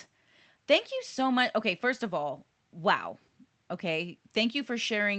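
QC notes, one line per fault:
No faults are heard in this speech clip. The audio carries the usual coding noise of a call path, with the top end stopping at 8 kHz, which fits Opus at around 32 kbps.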